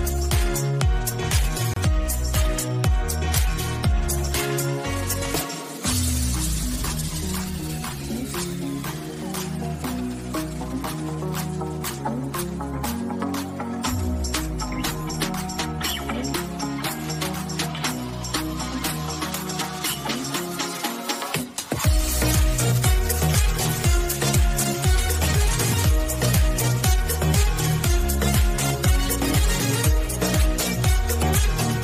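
A gap at a join of encoded pieces opens from 1.74 to 1.76 s, a 29 ms gap cutting into otherwise continuous sound. Separately encoded sections were joined untrimmed, leaving encoder start delay and last-frame padding in place, so the sound drops out, its edges smeared by the codec, then resumes where it left off.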